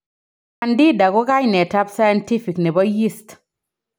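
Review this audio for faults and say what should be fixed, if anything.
The output device went idle during the half-second of silence at the start and had not woken or relocked by the time speech arrived, a clipped start after a pause. The first 121 ms, from 0.50 to 0.62 s, is swallowed, so "ko kainet ab scientific" bursts abruptly out of silence with its opening sounds missing. To prevent the clipped onset, keep the output stream active through silence, or send a short lead-in of low-level signal before playback resumes.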